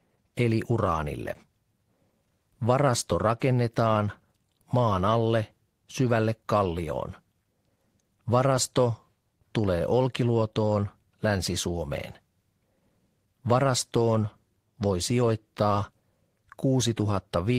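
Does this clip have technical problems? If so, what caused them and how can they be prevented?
No, no technical faults are audible.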